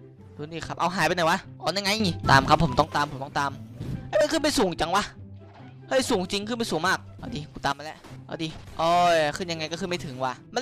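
At 2.0 s the level and background noise jump up about 9 dB until 2.84 s, then at 7.72 s they drop about 12 dB until 8.04 s. Each is a sudden gain jump, likely a gain change applied without a ramp.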